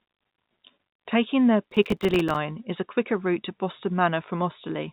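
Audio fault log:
1.64–2.36 s, processor overload crackle: dozens of few-millisecond buffers miss their deadlines and drop to silence, making gritty tearing that stops just before "is a quicker route".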